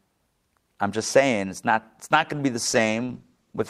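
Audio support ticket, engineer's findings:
Call bitrate drop from 2.67 s, right after "going to be the", to the end: audio goes rough and dull, like the encoder dropped from roughly 32 to 13 kbps and lost the highs.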